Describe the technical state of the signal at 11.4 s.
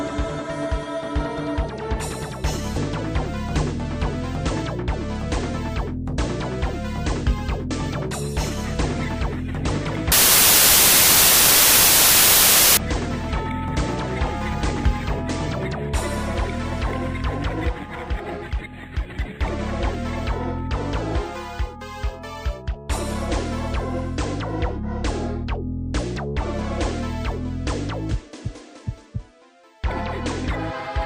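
At 11.4 s the signal is inside a wrong sample width fault running from 10.12 to 12.77 s. Audio written as 32-bit integers is being read as packed 24-bit integers, so many reconstructed values combine bytes from adjacent samples, and only some keep the true top bits. The result is loud broadband noise with the original sound faintly buried in it, playing at 0.75 times normal speed and correspondingly lower in pitch.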